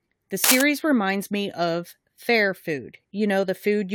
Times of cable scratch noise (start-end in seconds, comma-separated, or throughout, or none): 0.44-0.61